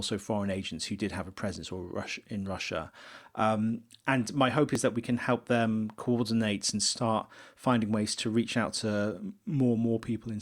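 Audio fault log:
4.75 s, overlap between stream segments: just after "and my hope" and before "that we can help" there's a tiny skip. Two stream chunks claimed the same moment, so the player trimmed audio that wasn't actually doubled, dropping about 5 ms and leaving a waveform jump.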